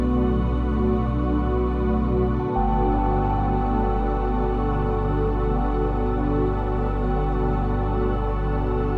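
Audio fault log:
No technical faults are present in the signal.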